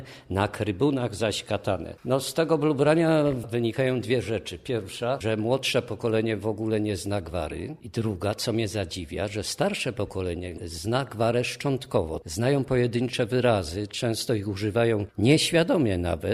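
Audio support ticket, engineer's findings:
Nothing stood out on listening; no fault to report against this ticket.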